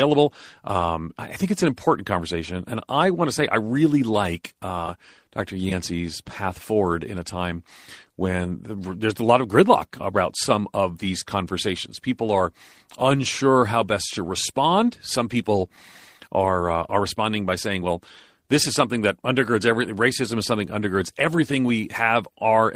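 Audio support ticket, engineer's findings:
Engineer's findings: no audio fault found in the speech clip.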